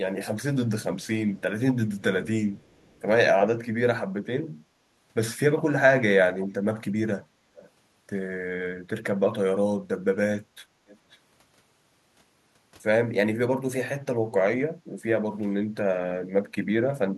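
A loudspeaker on the far end of this speech call was likely picked up by its microphone, and that side's echo canceller did not remove all of it, so an echo leak comes back as a faint, delayed second copy of the talker. It trails by 352 ms at 1.02–1.07, 1.98–2.02 and 2.58–3.02 s, sitting roughly 35 to 40 dB down, barely a ghost. It returns with a 428 ms lag at 6.34–6.48 and 7.57–7.70 s, noticeably stronger at around 20 to 25 dB below the speech. At 10.87–11.18 s the lag is 512 ms, at about 30 dB down. At 10.61–10.72 s the canceller clamped the microphone while the loudspeaker played, so the background is gated by the echo canceller: the room sound dips by about 10 dB for roughly a tenth of a second, then comes back as the canceller releases.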